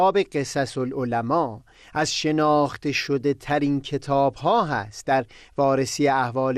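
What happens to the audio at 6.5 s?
At 6.5 s the speech is still dull and gurgling, as throughout, likely from MP2 compression at a low bitrate near 80 kbps. Starved upper sub-bands flicker off, unlike a steady low-pass cut.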